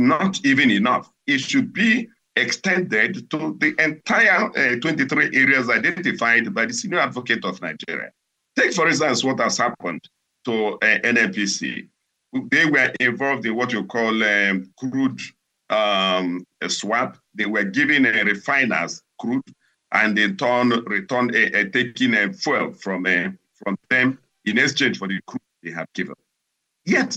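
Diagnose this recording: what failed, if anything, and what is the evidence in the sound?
Twice the treble goes dull and a gritty, grainy noise rises under the sound: from 10.99 to 13.09 s and again from 19.20 to 21.33 s, each lasting about 2.1 s before the brightness returns. This is a Bluetooth SBC bit pool drop at the codec stage. On a congested link the sender cut its bit allocation, which fits a fall from bit pool 31 to 14, near 99 kbps. The top sub-bands were starved and the rest coarsely quantised until the rate recovered.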